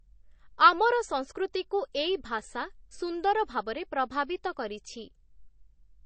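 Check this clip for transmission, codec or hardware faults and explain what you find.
There is one fault, present throughout the speech. MP3 compression is the likely cause. Nothing is left above 8.3 kHz, a fixed treble cut that fits a low bitrate of about 32 kbps. Weak frequency lines drop in and out between frames, so the speech sounds plainly watery and swirly, with metallic chirps on s sounds and smeared onsets.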